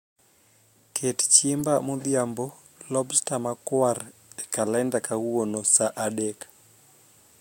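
Speech, with a corrupt frame decoded from 1.60 to 1.64 s: damaged bits across a few frames produce a brief chirp or burst, visible as a misplaced, scattered energy patch peaking near -20 dBFS.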